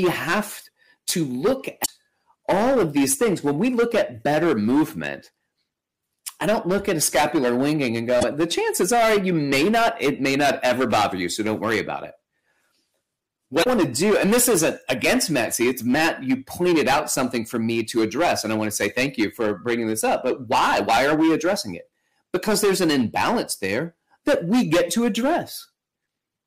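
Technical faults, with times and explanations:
throughout: hard clipping, overdriven by about 18 dB so roughly a tenth of samples hit the ceiling, their tops squared off into harsh fuzz on every loud syllable.
1.82 to 1.89 s, 8.17 to 8.24 s, 13.60 to 13.67 s: damaged data in a compressed stream, brief glitches as the decoder loses frame sync, after "have to look", after "a scapular winging and", and before "to do and this".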